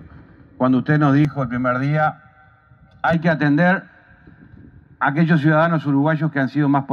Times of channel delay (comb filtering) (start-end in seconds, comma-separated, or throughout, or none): 1.25-3.13